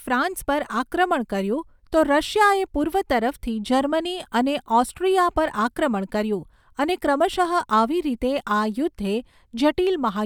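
Speech recording with no technical faults to report anywhere in the signal.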